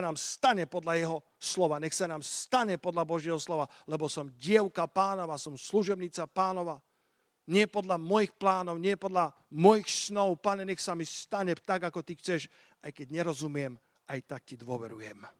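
Nothing here stands out as a technical fault; the speech just rolls along through its Opus voice coding at 24 kbps without anything going wrong along the way.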